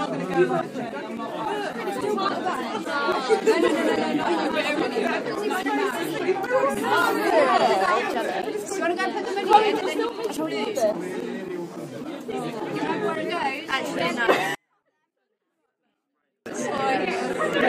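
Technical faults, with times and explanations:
14.55–16.46 s, 24-bit alignment error (too quiet): the sound stays clean but drops by about 48 dB at once and is nearly inaudible. Samples held in the low 24 bits of a 32-bit word are being read as full 32-bit values, so every sample is scaled far down.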